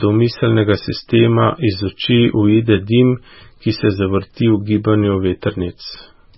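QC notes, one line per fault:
Throughout: MP3 compression, heavy. Nothing is present above 5.6 kHz, so s sounds lose their edge and the speech sounds dull. Weak frequency lines flicker on and off, giving a watery, swirly texture. This is likely a starved MP3 encode, fitting roughly 16 kbps.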